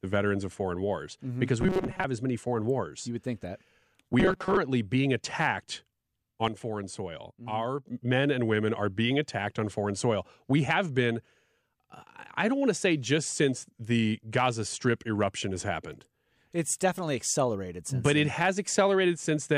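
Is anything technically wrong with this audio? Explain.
Yes, two kinds of technical fault affect this speech clip.

From 1.61 to 2.05 s, just before "as many foreign wars", and again from 4.20 to 4.58 s, between "would think that" and "being attacked", the voice turns into a rigid metallic buzz at 188 Hz that only loosely follows the words. This is robotic sound from repeated short buffers. The likely cause is audio arriving too slowly, so the playback loops a tiny slice of about 5 ms in place of missing sound. That loop length fits the 188 Hz buzz. Most of the first stretch is filled this way, and roughly half of the second.

From 6.48 to 7.87 s, ending just before "men and women are", the level abruptly drops by about 7 dB, and the background noise drops with the voice before both jump back. This is a sudden gain jump, likely a digital gain change applied instantly rather than faded in.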